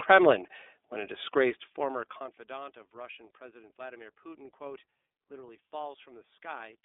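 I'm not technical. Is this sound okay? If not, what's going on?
No. The whole clip has passed through the iLBC codec, a phone-call voice coder. It keeps only about 250 Hz to 3.6 kHz, so the speech sounds thin and boxed-in. It also rebuilds the voice in 30 ms chunks, which leaves a plainly audible rough, synthetic edge.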